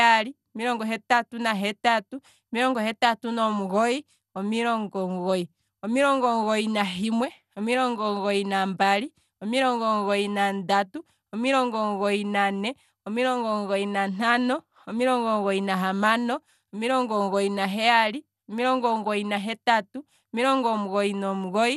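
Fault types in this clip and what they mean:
MP2 compression: The speech is dull, with nothing above 12.2 kHz and a gurgling, granular roughness. Likely from low-rate Layer II coding, near 80 kbps.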